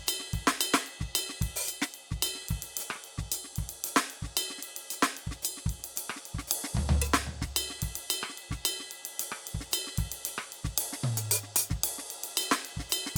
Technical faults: none

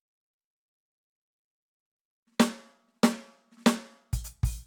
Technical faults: none

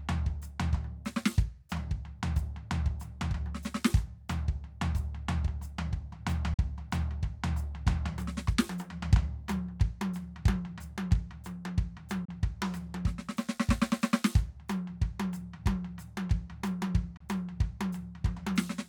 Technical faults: Bluetooth dropout

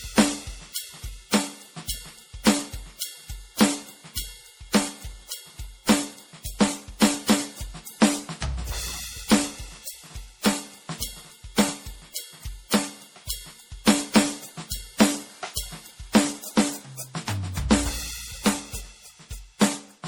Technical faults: generation loss

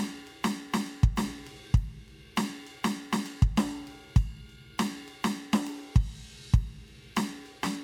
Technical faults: none

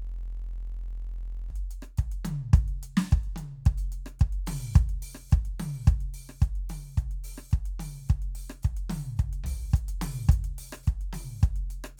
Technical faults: system hang loop

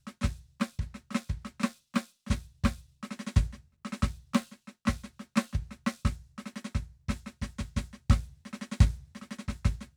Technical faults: none

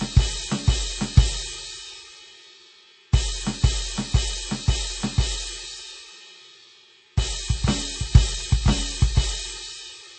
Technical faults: MP3 compression

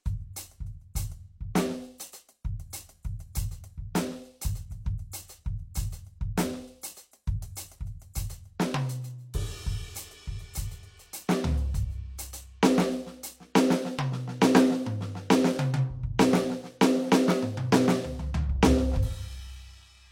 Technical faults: pre-echo

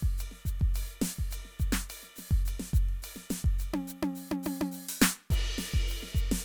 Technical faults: none

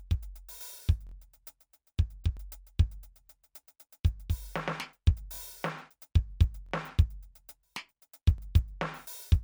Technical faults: repeated buffer

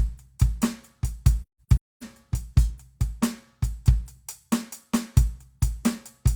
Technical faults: AAC frame loss with muting

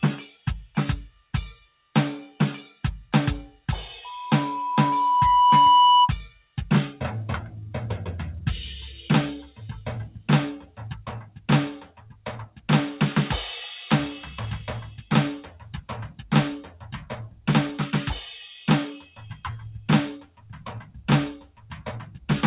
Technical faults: noise suppressor applied to music or sounds; sound cut by the noise suppressor; loudspeaker feedback squeal

